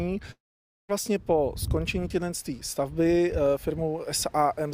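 At 0.31 s the sound stops short. A brief buzzy continuation of the last sound follows and fades within a few hundredths of a second. Then about 520 ms of silence remain until the audio returns at 0.91 s. The return does not pick up where it left off. About 580 ms of the original is simply gone. This is likely a long network dropout. No audio arrived, so the receiver stretched the last fragment, let it die away, and resumed later.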